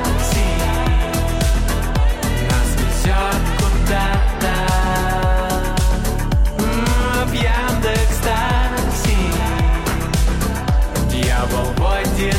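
No technical faults are audible.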